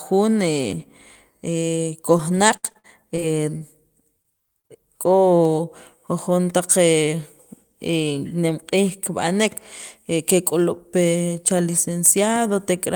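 Speech with short concealed packet loss at 2.17–2.21, 4.22–4.26, 4.60–4.66 and 4.68–4.71 s: audio packets arrived too late for decoding, so the receiver extended the preceding sound, leaving brief smears or wobbles. Between 2.57 and 3.62 s, repeated packet loss opens seven holes of up to 66 ms, and with about a fifth of that stretch patched over, the speech turns choppy and robotic.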